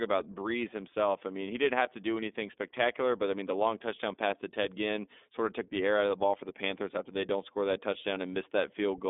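Speech with a narrow, telephone-like sound throughout: the band runs roughly 250 Hz to 3.6 kHz, nothing is heard above 3.8 kHz, and the voice has a plainly rough, slightly synthetic edge. That is the iLBC codec at work, coding each 30 ms frame independently in a way that fits its 13.33 kbps mode. At 3.34 s a single sharp click appears as a thin vertical line in the spectrum. This is likely dropped samples: a tiny fraction of a millisecond of the stream goes missing, so the waveform jumps abruptly to a later value.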